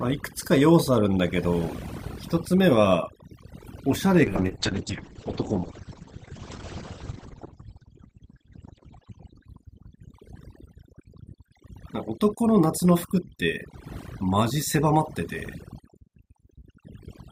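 Right from the start, the whole clip has overdone noise removal. The suppressor was clearly pushed too hard: any frequency band that sits near its idea of the noise floor gets pulled way down or switched off, and the softer parts of the speech get dragged out with it. So the background drops away, breaking up into little twinkly specks.

Then at 4.24 s there's a call bitrate drop that lasts until about 11.53 s. The call's bandwidth estimate fell and the encoder got starved of bits. The roughness points to something like 64 kbps falling to around 9 kbps, and the top end is cut from roughly 20 kHz down to 8 kHz, which is why it goes muffled and grainy. It stays at its worst for about 4.5 s before the bitrate climbs back and the highs return.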